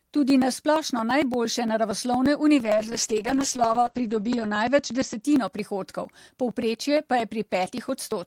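From about 0.07 s to the end, periodic USB or driver dropouts skip a sliver of audio every 0.115 s, giving steady ticks whenever speech is present. Between 2.65 and 5.27 s there's a call bitrate drop, from 40 to 9 kbps, bottoming out for about 1.9 s. Bandwidth narrows from 20 kHz to 8 kHz, so the speech goes rough and muffled.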